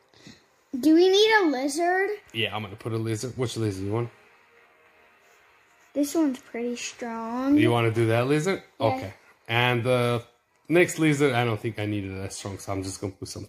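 No technical fault can be heard anywhere in the audio; the signal holds steady throughout with nothing that points to a problem in how it was captured, processed or delivered.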